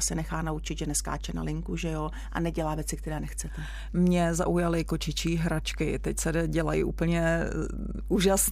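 From the first moment to the last, the speech sits over a steady mains hum at 50 Hz, loud enough to be only around 10 dB below the talker. A ground loop or nearby transformer has let the power line leak into the signal path, giving a constant low drone with a buzz from its harmonics. On a spectrogram it shows as an unbroken horizontal line at 50 Hz with weaker parallel lines above; the waveform carries a persistent low-frequency ripple beneath the speech.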